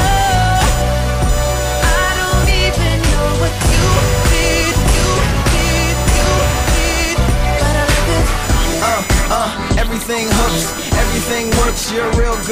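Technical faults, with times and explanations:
Throughout, computer activity noise: a buzzing, chirping whine with a repetition rate around 1 kHz, sitting roughly 15 dB below the sound. Shifting processor, graphics or mouse load disturbs the ground shared with the audio circuit, so the noise follows the computer's activity, not the sound.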